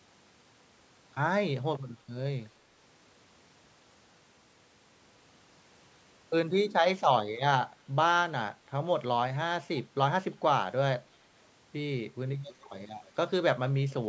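Speech with an echo leak: a faint delayed copy of the speech returns about 0.31 s later at 9.76–9.82 s, 12.48–12.83 s and, weaker still, 13.05–13.11 s. It's likely a loudspeaker echo canceller letting residue through. A spectrogram shows low-level, time-shifted repeats of the speech harmonics, cut off at 8 kHz like the rest of the call band.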